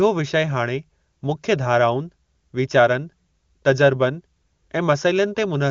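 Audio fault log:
No fault to log for this speech.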